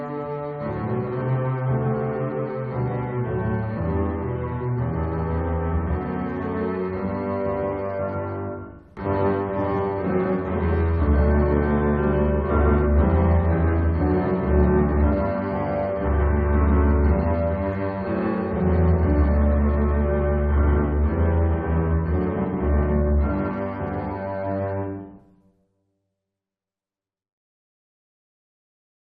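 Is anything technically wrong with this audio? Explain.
Yes. A doubled audio track runs through the whole clip. A second, full-band copy of the sound trails the original by roughly 150 ms, at about the same loudness. There is no decay and no added room colour, so it is not reverb. It is a distinct slapback repeat on every onset, which makes the audio sound stuttered. The likely cause is a second capture path with extra latency, or an edit that left two copies out of step.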